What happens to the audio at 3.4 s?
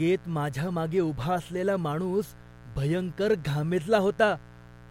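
At 3.4 s the speech carries mains buzz, present across the whole clip rather than only at that moment. Switching spikes twice per 60 Hz cycle add harmonics up to several kHz, producing a steady, raspy buzz around 25 dB below the speech.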